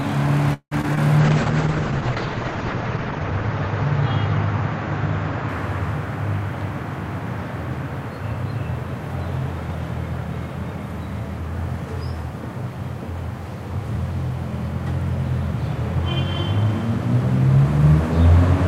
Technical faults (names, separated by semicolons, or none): call audio freeze; short concealed packet loss; call bitrate drop; jitter buffer speed-up